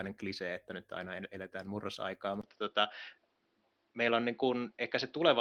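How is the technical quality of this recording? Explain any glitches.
There's one real glitch in this speech clip, at about 2.41 s, right after "nyt aina eletään murrosaikaa". After a 20 ms gap, the sound goes duller and stays that way to the end, with nothing above 5.9 kHz and a new background noise roughly 40 dB under the speech, while loudness stays about the same. That's likely the input switched to a poorer device, like a second mic or a headset's call profile with a narrower band and its own noise. Underneath, Opus voice compression adds only light codec damage.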